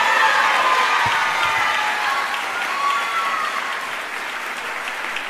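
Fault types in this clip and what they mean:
No faults stand out anywhere in this clip, so there's nothing to list here.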